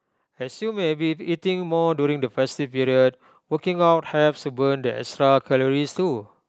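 From 0.21 s to 2.67 s, automatic gain rising: the gain control judged the input too quiet and lifted its level by about 8 dB over roughly two and a half seconds, so the voice and room background swell upward together. Content stops near 8 kHz, consistent with the call codec's bandwidth.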